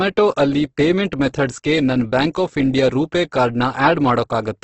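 Throughout, the speech sounds rough and grainy, with nothing above 8.1 kHz. The likely cause is heavy Opus compression in CELT mode, fitting a bitrate near 12 kbps.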